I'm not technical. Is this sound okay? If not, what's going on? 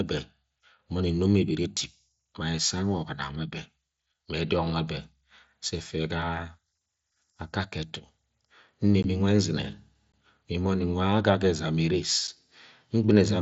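No. There are three tiny gaps in the speech, at 9.03, 10.12 and 12.27 seconds. This is unconcealed Bluetooth headset packet loss. The headset sends the voice to the phone in very small pieces, and a few went missing. Nothing filled the holes, so the sound just drops out. The first two gaps last about 15 milliseconds, and the last one about 7.5. Each is a short hole with abrupt edges.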